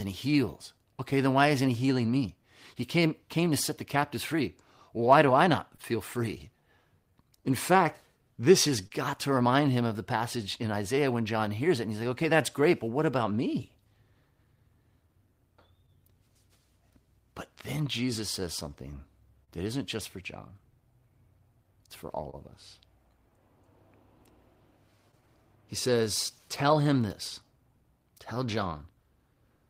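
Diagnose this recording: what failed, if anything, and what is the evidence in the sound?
Clock drift between sender and receiver runs throughout this speech. At the network or buffer stage, the sender's clock runs roughly 2% slow, so the receiver's jitter buffer keeps draining.

Repeated timing corrections occur from 1.52 to 29.35 s. The receiver repeats short pieces, stretching playback to 99% speed and adding roughly 400 ms.

Scattered short gaps fall at 5.76–8.92 s, 15.86–19.49 s and 22.30–27.01 s, about four or five in each stretch. Lost or late packets, none longer than about 30 ms, were concealed by continuing the preceding sound.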